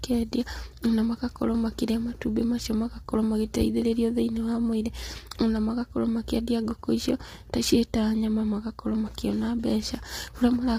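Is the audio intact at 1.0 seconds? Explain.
No. At 1.0 s the speech already has the rough, grainy texture that runs through the whole clip, with noise filling the gaps between harmonics and nothing above about 15.6 kHz. That points to low-delay AAC compression, likely AAC-ELD. Its short frames can't resolve pitch harmonics finely, and the damage here is heavy enough to suggest a bitrate around 24 kbps. It isn't a momentary glitch; the same grain is present from start to finish.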